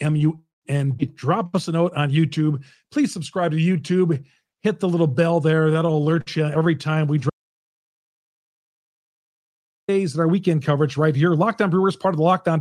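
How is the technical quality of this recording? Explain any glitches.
The recording has two clear faults in the middle of the speech: a stretch of stuttering followed by a complete dropout.

Repeated stalls (stutter) run from 5.51 to 6.68 s. Packets arrived late or more slowly than they were played out, so the jitter buffer emptied again and again. Each time, the receiver stretched the last bit of sound to cover the wait. There are 15 such stalls, the longest about 50 ms, together filling roughly 196 ms, about 17% of that span. Nothing is lost, but the speech drags and stutters.

An audio dropout to silence runs from 7.30 to 9.88 s, about 2.58 s of dead air. The speech cuts off mid-flow and returns just as abruptly, and the gap is silent with no room tone. That points to the input signal being lost, likely through a disconnected device, a failed link or an accidental mute, while the recorder kept writing silence. 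Whatever was said during that gap is gone.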